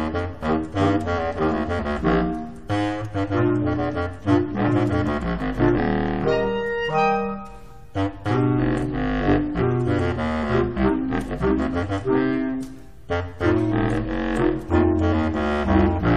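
The audio has damaged data in the compressed stream at 5.77 s. A brief blip is heard as the decoder misreads corrupted frames and resynchronises at the next header.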